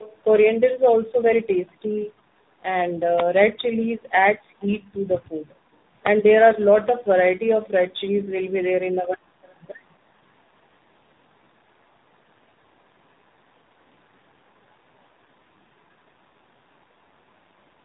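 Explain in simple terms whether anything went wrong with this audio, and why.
Two things went wrong. Throughout, the speech has tandem speech coding. The call was squeezed through three speech codecs in a row, each re-encoding the damage left by the one before. That makes it rougher, duller and more warbly than one phone link would, with nothing above 3.8 kHz. A single poor link would sound muffled but not this layered and smeared.

From 4.62 to 4.66 s there is a brief, very faint scrap of the voice coming back about a quarter-second late. That is most likely an echo leak, where a loudspeaker's echo canceller let a little through. The delayed repeat is what separates it from codec roughness, which has no time lag.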